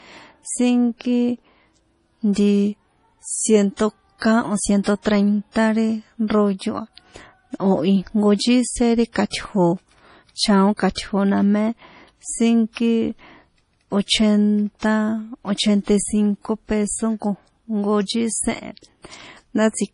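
Throughout the clip, the speech has the watery, swirling texture of heavy MP3 compression, likely from an encoder starved of bits, which fits a rate around 32 kbps. Nothing remains above 10.6 kHz, weak spectral lines flicker between frames, and s sounds chirp metallically.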